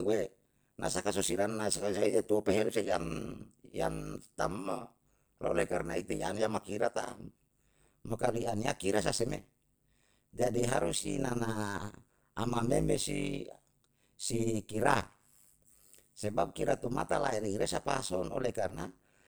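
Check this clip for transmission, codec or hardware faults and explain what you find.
One fault is present, and it runs through the whole speech clip. Overlap-add ripple: frames rejoined with a mismatched overlap dip the level by about 60 dB around 100 times a second, producing a steady metallic buzz with extra tones around each note rather than irregular dropouts.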